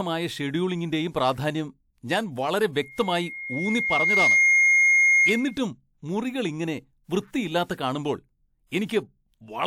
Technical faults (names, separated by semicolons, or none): loudspeaker feedback squeal; pre-echo